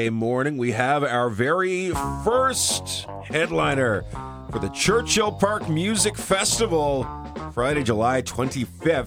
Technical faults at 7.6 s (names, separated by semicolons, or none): none